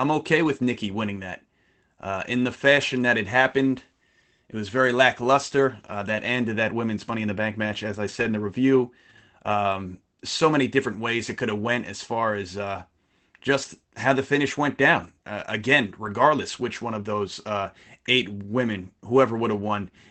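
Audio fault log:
2.77–2.83 s (after "in the"), 8.07–8.29 s (after "match as I"), 14.99–15.09 s, 16.05 s (before "which one of those"): lost packet rebuilt from error correction. Dropped packets were replaced by low-bitrate backup copies from the following packets, so there is no gap. Those stretches sound briefly rougher and noisier; the longest one, around 220 ms, is at 8.07 s.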